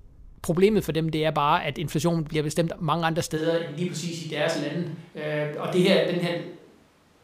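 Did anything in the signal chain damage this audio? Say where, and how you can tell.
Yes. A switch to a distant microphone occurs at 3.39 s, right after "bliver bestemt mange andre", and lasts to the end. The speech turns abruptly roomy and hollow, with thinner bass and room noise about 35 dB below it, at much the same level. This likely happened at the capture stage, where the close microphone dropped out and a farther one took over.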